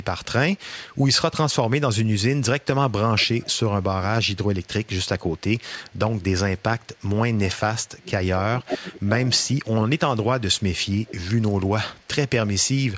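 Echo leak from 0.03 to 1.03 s: a faint copy of the speech trails the original by about 0.47 s, very quiet, around 40 dB below the talker. This likely comes from a far end playing the call over a loudspeaker, with its echo canceller letting part of the returned signal slip back. The same 0.47 s echo leak returns from 2.61 to 7.01 s, stronger at about 25 dB down.

Speech suppressed in double talk from 7.05 to 8.84 s: the talker's level sags in patches totalling roughly 0.7 s, dropping by as much as 25 dB, so the speech thins and breaks up. The likely cause is an echo canceller that could not tell overlapping talk from loudspeaker echo and attenuated both together.

Echo leak at its worst from 8.68 to 9.49 s: the 0.47 s copy sits only about 5 dB under the direct speech.

Speech suppressed in double talk again from 9.54 to 11.12 s: dips add up to about half a second, the deepest around 20 dB, chopping the speech in pieces, likely from the same overlap handling.

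Echo leak from 11.09 to 12.85 s: the delayed copy falls back to about 30 dB below the speech, a faint, lagging shadow that runs almost to the end. Throughout, the call's microphone processing leaves nothing above 8 kHz, which is expected here.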